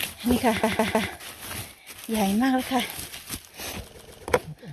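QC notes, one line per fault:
0.63 to 1.10 s, repeated frames: a block of about 157 ms, consistent with six compressed frames, plays three extra times, a stutter adding 470 ms. The waveform shows the same envelope shape copied side by side, and the spectrogram shows an identical pattern tiled four times.
3.97 to 4.23 s, repeated frames: a shorter block of about 131 ms, consistent with five frames, plays two extra times, adding 261 ms of stutter. The waveform shows three matching segments in a row, and the spectrogram shows the same texture repeated.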